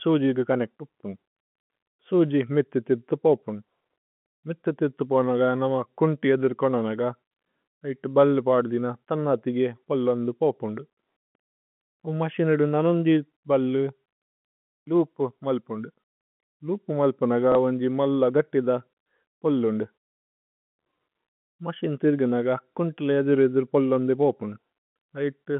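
Speech over a G.711 telephone line, limited to roughly 150 Hz to 3.4 kHz. At 17.52 to 17.55 s, just after "ലൂപ് മല്പുനഗ", there is packet loss with the last packet repeated. A 30 ms stretch replays the previous audio, which fits one lost packet. The replay sounds like a small blip.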